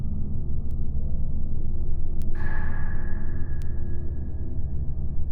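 At 0.71, 2.22 and 3.62 s, single bits flip in the stored or transmitted data, producing a bit error spike each time. The affected value jumps by a power of two and snaps straight back, so each spike is a sharp, broadband tick unrelated to the surrounding sound. They peak at about -32, -20 and -26 dBFS, with 2.22 s the loudest. The 3.62 s tick seems to span a few consecutive samples rather than one.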